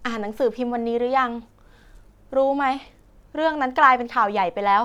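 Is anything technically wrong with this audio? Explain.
No, nothing technically wrong can be heard in this speech recording; the signal stays steady and intact throughout, with no audible disturbance.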